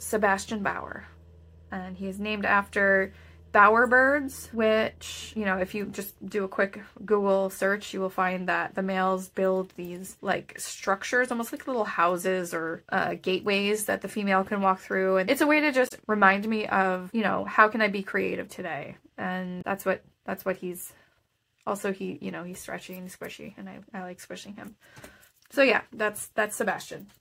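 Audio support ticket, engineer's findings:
Damaged data in the compressed stream, decoder side. Corrupt bytes at two points; decoder misreads them, loses frame sync, rescans for the next header.

Event 1: 15.85 to 15.92 s, about 70 ms. Short glitch replacing the sound, garbled decode of the bad frame before sync recovers.

Event 2: 19.58 to 19.62 s, about 44 ms. Briefer blip, same mechanism.

Probable component: storage or transport feeding the decoder.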